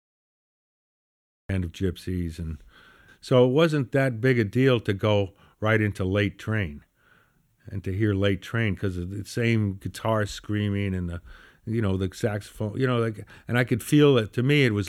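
The recording or stream began late, a cut-off start on this speech clip: digital silence runs from 0.0 to 1.49 s, then the audio switches on abruptly in the middle of a sound, with no natural attack or fade-in leading into it.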